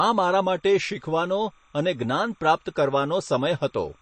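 From the start the speech sounds watery and swirly, with metallic chirping on s sounds and nothing above 8.3 kHz. That is MP3 compression, likely at a low bitrate around 32 kbps, where the encoder cuts the treble and drops weak frequency lines from frame to frame.

From 0.42 s to the end, a faint chirping warble sits far below the speech, flipping between tones around 1 and 2 kHz. This is timecode bleed: a linear timecode signal at 30 frames per second leaking in from a neighbouring track or cable.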